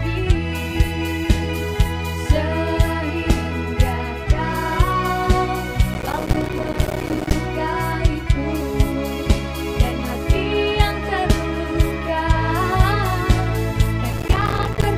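From 5.94 to 7.33 s, and again from 14.13 to 14.84 s, there's processor overload crackle. The processor keeps missing its deadlines for tiny buffers of around 5 ms, and each miss drops in a short silent gap, so the sound tears into gritty crackle until the load eases.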